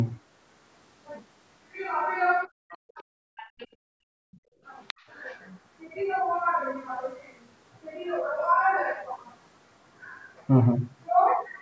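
From 2.47 to 3.66 s the speech dips hard, down about 40 dB at worst and for roughly a second in total. That's speech suppressed in double talk, likely the echo canceller ducking everything while both ends talked. In the same stretch, the other side's voice leaks through in faint scraps at 2.70–2.77 s (about 25 dB under the speech) and 3.37–3.67 s (about 20 dB under), likely loudspeaker echo the canceller missed. At 3.94–4.04 s the background is gated by the echo canceller, so the room sound drops about 37 dB for a tenth of a second and then comes back. Another brief double-talk suppression hits at 4.32–4.37 s, a quick notch of about 25 dB. More far-end leakage follows at 4.87–5.05 s, fairly audible at about 15 dB under the speech, and at 5.24–5.40 s, barely there at about 35 dB under.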